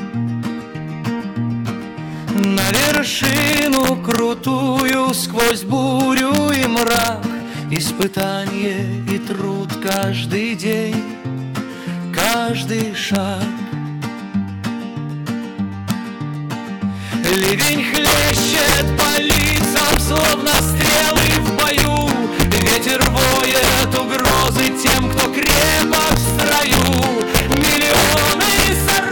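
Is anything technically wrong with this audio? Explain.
Yes, there's integer overflow running through the whole clip. The signal has been pushed about 7 dB past full scale. Peaks that should have been limited instead wrap around to the opposite extreme of the integer range, flipping sign. Only a small slice of samples crosses the line, around one or two percent. But every loud moment that does produces a violent, splintering crack, far harsher than ordinary clipping.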